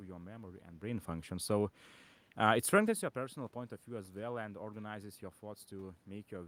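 Nothing stood out on listening: the room's background noise is part of the recording, and the level shifts around 0.5 s and 3 s sound like the talker moving relative to the microphone, not like anything going wrong in the system.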